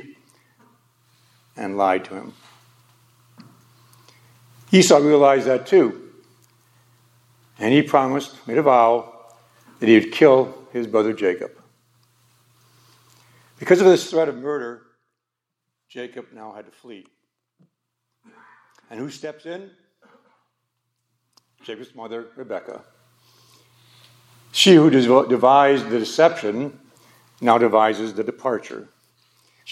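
No technical faults can be heard in this audio; the signal holds together without any audible defect.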